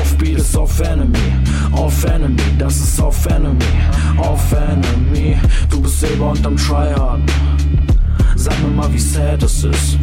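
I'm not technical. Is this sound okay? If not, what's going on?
Yes, this sound is okay, and there's nothing going on with it that needs fixing.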